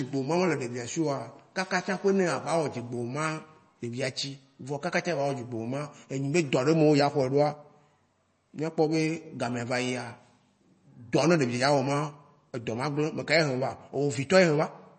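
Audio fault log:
Throughout: MP3 compression. A low-bitrate encode, likely around 32 kbps, has cut the treble at 8.3 kHz and dropped weak frequency lines that flicker between frames, so the speech sounds dull, watery and swirly, with chirpy s sounds and smeared consonant attacks.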